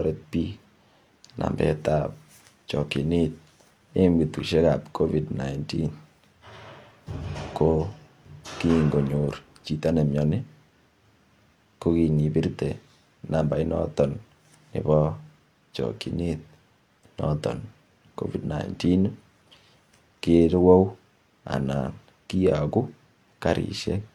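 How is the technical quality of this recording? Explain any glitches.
There is one glitch: a brief skip in the speech at 18.39 to 18.45 s.

This is a case of compressed frames skipped. A block of the encoded stream, apparently one frame of 46.4 ms, was either missing or rejected by the decoder as damaged, so playback jumped forward by about 50 ms of audio. The result is a short jump where a sliver of the speech drops out.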